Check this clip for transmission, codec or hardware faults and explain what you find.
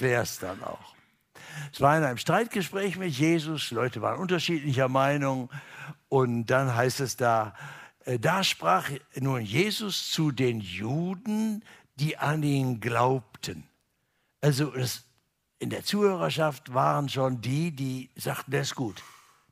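No transmission, codec or hardware faults are audible here.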